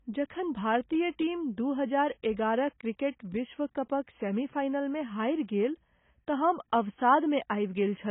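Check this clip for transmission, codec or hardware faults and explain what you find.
One codec fault is present for the whole clip. Low-bitrate audio saved at a high bitrate, throughout: the speech has nothing above 3.8 kHz and sounds dull and smeared, likely from an earlier very low-bitrate encode re-saved as high-bitrate MP3, which cannot restore the lost detail.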